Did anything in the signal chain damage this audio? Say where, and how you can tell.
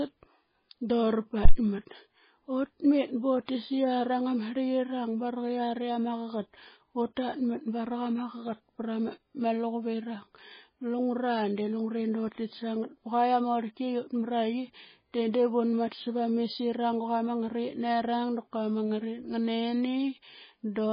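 Yes. Phantom power thump at 1.45 to 1.54 s, in the analogue wiring: a deep thump dying away over about 20 ms as a supply step passed through the coupling capacitors.

MP3 compression, likely the cause, throughout at the codec stage: heavy watery, swirling damage and nothing above 5 kHz. This fits a bitrate near 16 kbps, with weak frequency lines dropped.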